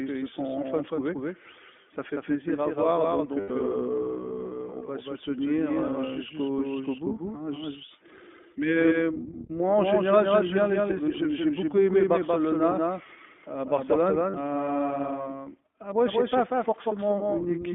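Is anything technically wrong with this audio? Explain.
Yes, this speech has three faults.

Doubled audio track, throughout: a second, full-band copy of the speech runs about as loud as the original, roughly a fifth of a second behind, with no decay or room colour. It is likely a second capture through a slower path. A waveform shows each syllable repeated at that fixed offset, and a spectrogram shows every pattern traced twice.

iLBC codec, throughout: this narrowband VoIP codec codes each frame independently, which fits 20 ms frames and the 15.2 kbps mode. The audio is confined to roughly 200 Hz to 3.5 kHz, giving clear but plainly rough, synthetic speech. A spectrogram shows a hard ceiling at 3.5 kHz and nothing below 200 Hz.

Lost iLBC frames at 3.40–3.52 s (100 ms) and 14.30–14.36 s (40 ms): the decoder fills each gap by repeating the last pitch cycle mixed with noise, which fits five and two lost frames. 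Each gap sounds like a held, buzzy vowel that recovers almost at once. A spectrogram shows frozen, smeared harmonics, and a waveform shows near-identical repeating cycles.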